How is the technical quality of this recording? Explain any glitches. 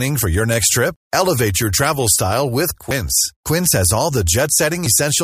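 The recording has one technical glitch, a short skip in the speech at 0.96 s, just after "for your next trip". The likely cause is audio missing between chunks: the recording chain appears to process the sound in blocks, which would fit 2-second chunks, and drops a short stretch while one block closes and the next opens. Roughly a twentieth of a second goes missing, and the audio on either side is butted together with no gap, so the speech jumps forward abruptly.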